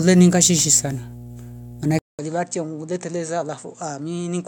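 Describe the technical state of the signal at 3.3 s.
A ground loop or nearby transformer is leaking the 60 Hz power line into the signal as mains hum, a steady low tone roughly 20 dB below the speech, present throughout. From 1.99 s onward, the recording has likely been switched to a poorer input device, a case of input switched to a poorer device. After a 200 ms silence at the switch, the speech at 3.3 s is dull and boxy, with nothing above 8.7 kHz, about 10 dB quieter, and carrying a new noise floor roughly 35 dB below it.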